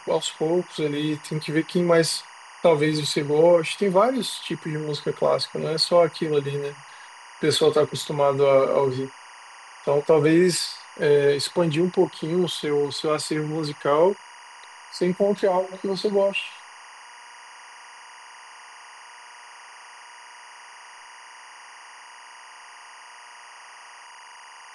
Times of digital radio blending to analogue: none

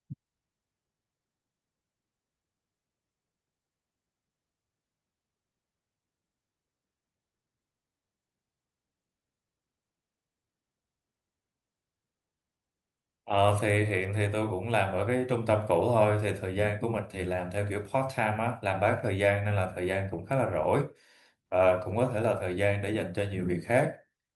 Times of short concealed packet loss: none

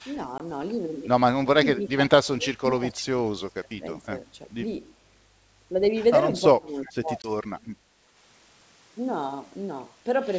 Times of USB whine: none

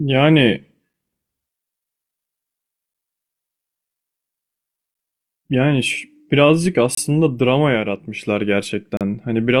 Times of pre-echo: none

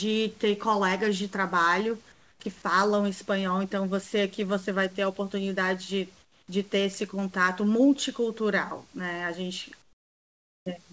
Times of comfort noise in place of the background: 2.12-2.40, 6.22-6.48, 9.82-10.66

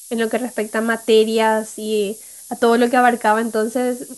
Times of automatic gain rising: none

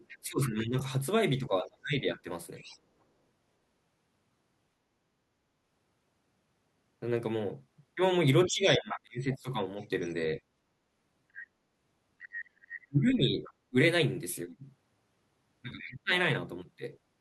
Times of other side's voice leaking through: 0.08-0.49, 2.16-2.79, 8.90-13.53, 15.79-15.91

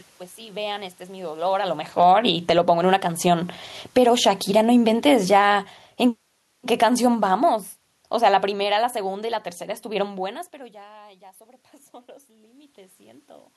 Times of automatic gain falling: 1.85-2.85, 3.40-10.22

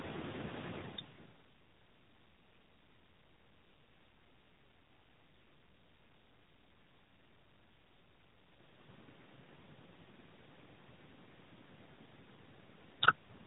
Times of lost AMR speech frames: none

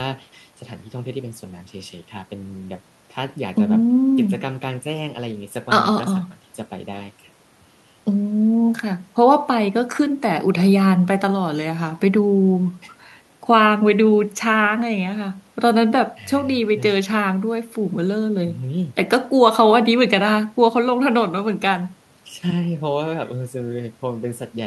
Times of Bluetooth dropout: none

